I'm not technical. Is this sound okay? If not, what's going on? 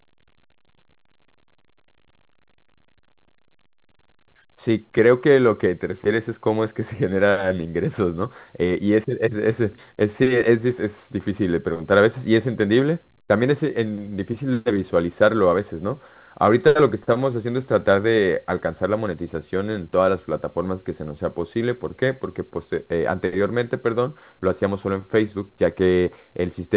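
Yes, the recording is in good technical shape, with the narrower sound of an ordinary phone call because the call's audio path carries nothing above about 4 kHz.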